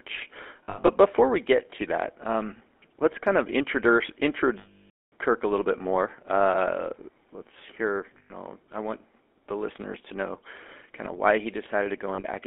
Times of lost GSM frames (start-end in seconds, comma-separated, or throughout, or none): 0.64-0.90, 4.58-5.13, 8.18-8.32, 12.14-12.27